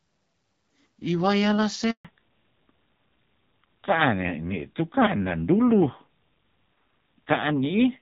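At 1.91 s the speech cuts out, fading within a few tens of milliseconds and staying silent until 2.05 s, a hole of 140 ms. This is a handover gap: while the call switched networks, no speech frames arrived, and whatever was said then is lost.

From 2.05 s to the end, the speech sounds duller and rougher, with nothing above 4 kHz. This is a fallback to narrowband. Before the switch, the clear, lightly coded sound fits HD Voice (AMR-WB at 12.65 kbit/s), and afterwards the sound points to AMR-NB at around 7.4 kbit/s.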